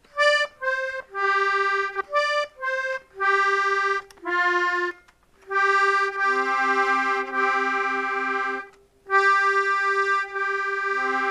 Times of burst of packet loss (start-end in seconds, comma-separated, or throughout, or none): none